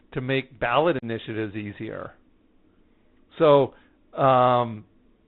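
From the start the speech sounds boxed-in and gritty: nothing reaches above 4 kHz, s sounds come out scratchy, a fine granular hiss sits under everything, and louder bright moments tear. That is the Bluetooth CVSD headset codec at work, which fits a 64 kbps link. It codes each sample as a single up-or-down bit with an adapting step, so fast, loud high content outruns the step and distorts while the quantising leaves that grainy noise floor.

At 0.99 s a short hole opens and lasts until 1.04 s, cutting in and out abruptly, and the speech returns a touch quieter for a moment before settling. This is unconcealed Bluetooth headset packet loss: about 37.5 ms of voice, a handful of packets' worth, was lost between headset and phone, and nothing reconstructed the gap, so silence or an idle pattern filled it and the codec's step size had to rebuild afterward.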